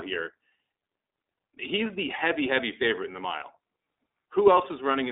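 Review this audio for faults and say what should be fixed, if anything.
The speech sounds boxed-in and slightly rough and synthetic throughout, with nothing below about 300 Hz or above 3.7 kHz. This is iLBC codec damage, plainly audible. The codec encodes each short frame independently, which fits 20 ms frames in its 15.2 kbps mode. To prevent it, capture or transmit with a wideband codec instead of narrowband iLBC.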